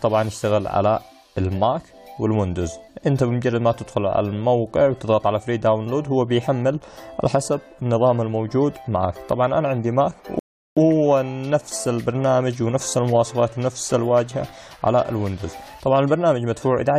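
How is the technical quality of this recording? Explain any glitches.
One glitch is audible: a rebuffering stall from 10.39 to 10.77 s. The player ran out of downloaded audio and paused until more data arrived, then picked up exactly where it had stopped. Nothing is skipped, but about 0.38 s of dead air is inserted. It sounds like the audio freezes into silence and then carries on seamlessly. On a waveform this shows as a flat, near-silent gap, and on a spectrogram as a clean vertical blank band with the content on either side matching up.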